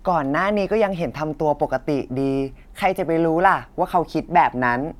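Speech recording with no technical faults found: no dropouts, clicks, clipping, level jumps or timing disturbances anywhere in the audio.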